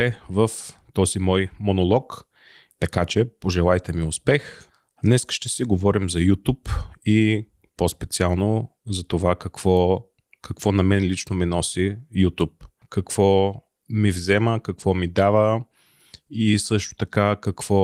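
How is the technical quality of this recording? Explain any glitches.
No glitches can be heard in this speech recording. The Opus voice compression shows only light coding traces while keeping the full audio band, which fits its hybrid mode at around 24 kbps.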